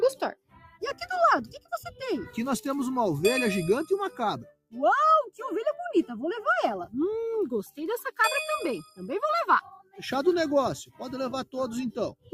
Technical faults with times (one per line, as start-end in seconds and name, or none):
0.00-12.34 noise suppressor applied to music or sounds
0.35-0.78 sound cut by the noise suppressor
4.51-4.73 sound cut by the noise suppressor
9.82-9.98 sound cut by the noise suppressor